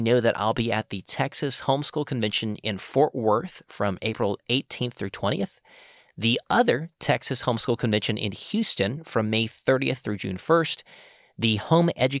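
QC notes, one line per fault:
Nothing to flag here, as no technical faults turn up anywhere in the speech.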